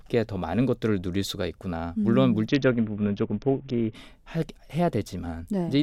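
From about 2.48 to 3.95 s there's a Bluetooth SBC bit pool drop: the treble dulls and gritty noise creeps into the speech, which points to the bit pool falling from 28 to around 6, roughly 60 kbps.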